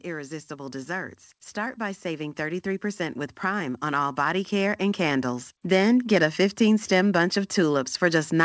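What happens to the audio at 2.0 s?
The speech and background are swelling together here: automatic gain rising lifts the level by about 12 dB, gradually, between 0.05 and 6.26 s, after judging the input too quiet.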